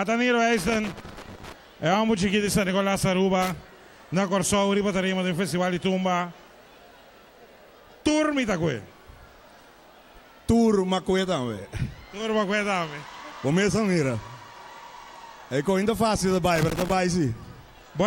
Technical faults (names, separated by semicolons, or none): loose connector crackle